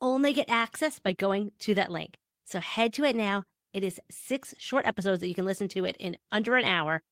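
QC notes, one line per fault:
No technical faults can be heard anywhere in this speech recording.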